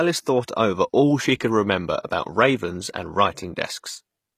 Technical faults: HE-AAC compression; pre-echo

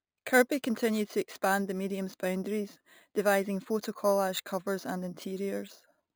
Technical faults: imaging from sample-and-hold upsampling

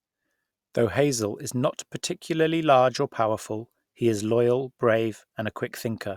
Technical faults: none

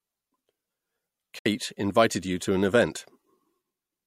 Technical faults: digital broadcast dropout

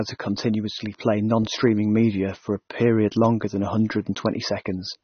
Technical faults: AAC compression

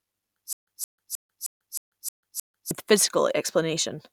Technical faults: stutter with silent gaps

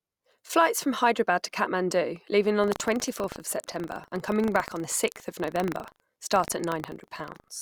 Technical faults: buffer tearing

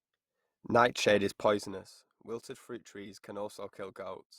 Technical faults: zipper noise

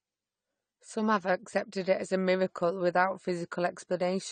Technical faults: AAC compression

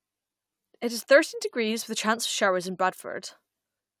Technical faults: none

